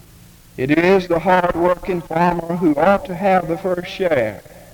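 Two sharp, isolated clicks sit at 0.90 s and 4.19 s, each a thin vertical line across the spectrum. Both are likely dropped samples, with a couple of samples missing so the waveform jumps abruptly to a later value, far too brief to remove any audible sound.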